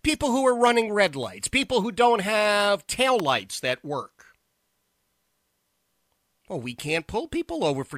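At about 3.20 s, right after "who don't have tail" and before "lights that work", there's a single sharp snap sitting on top of the speech, an electrical switching spike. It lasts only a few milliseconds and peaks fairly loud, but well short of full scale. It sounds like a tiny crack laid over the talker rather than part of the recording itself. The likely culprit is a nearby switch, motor or static discharge arcing briefly and the audio line picking it up.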